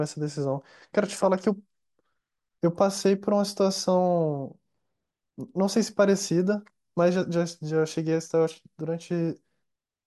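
No technical faults are audible anywhere in the speech recording.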